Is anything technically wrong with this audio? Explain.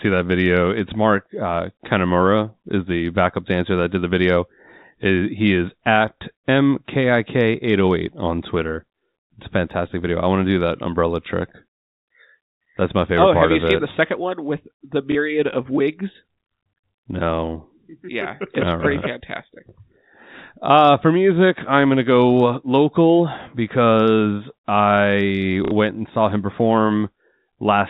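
Yes. There is packet loss with the last packet repeated at 6.18 s, 15.12 to 15.15 s and 25.65 to 25.71 s. Each time, the receiver replayed the previous chunk of the telephone-band speech to fill the gap. The first two gaps last about 30 ms, which fits 30 ms packets, and the third is twice that. The longer gap at 25.65 s gives a brief robotic stutter. Unlike a plain dropout, the gap is filled with repeated sound rather than silence.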